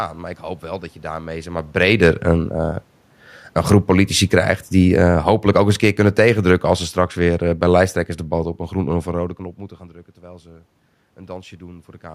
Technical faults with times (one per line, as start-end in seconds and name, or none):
3.42-9.42 automatic gain falling
3.82-4.80 automatic gain rising